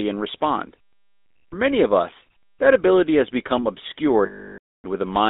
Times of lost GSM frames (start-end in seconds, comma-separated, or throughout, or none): 1.33-1.54, 4.26-4.85